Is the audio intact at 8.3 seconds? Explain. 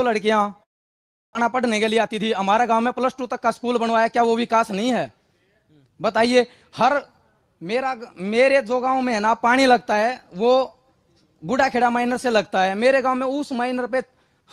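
Yes, at 8.3 seconds the audio plays through without any dropout, click, distortion or other fault.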